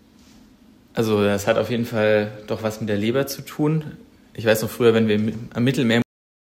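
The final stretch of buffers never reached the output, so at 6.02 s the audio has a cut-off end: the signal stops partway through a sound rather than finishing it. Nothing fades or rings out; the level drops straight to digital silence, and that dead silence fills the last half-second or so of the clip. To the ear it sounds as though playback was switched off mid-sound.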